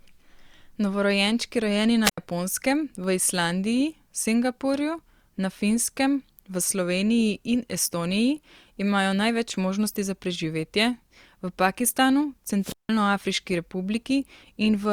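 The radio link of an analogue FM wireless microphone fades twice in this speech clip, and each time the receiver's squelch shuts off the output. That is a wireless microphone squelch dropout: a short surge of hiss as the signal weakens, then a hole of near silence before the voice returns. The first spans 2.03 to 2.18 s with about 82 ms muted; the second, 12.61 to 12.89 s, mutes for about 169 ms.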